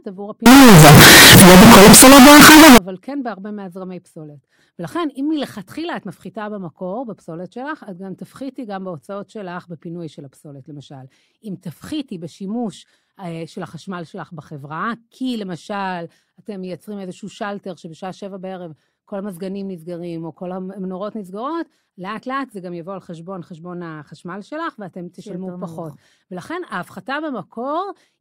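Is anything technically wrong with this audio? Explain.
Yes. Signed and unsigned mixed up, 0.46 to 2.78 s: the likely cause is 16-bit samples read with the wrong sign convention. That flips the top bit, so every zero crossing jumps across the full range. The speech becomes very loud, harsh distortion, with quiet moments as loud as the rest.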